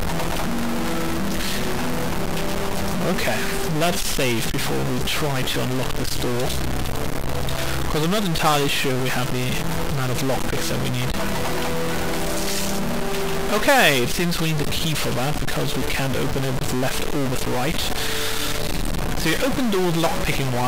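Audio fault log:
Throughout: stuck bit. A harsh, buzzy distortion rides on everything, and the pauses are filled with a fairly loud hiss rather than falling silent, the bit's step sitting at about -20 dBFS. The likely cause is one data bit held fixed by a broken line or converter, so roughly half the samples are offset by a large fixed step, and small signals flipping sign keep toggling that error, turning quiet gaps into noise.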